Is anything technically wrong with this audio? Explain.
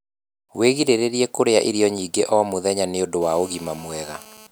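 Yes. From 3.22 to 4.47 s there is GSM phone buzz: a nearby 2G phone on a call transmits in bursts about 217 times a second, and the audio circuitry rectifies those radio pulses. The result is a steady, harsh, harmonic-rich 217 Hz rasp, about 23 dB below the speech.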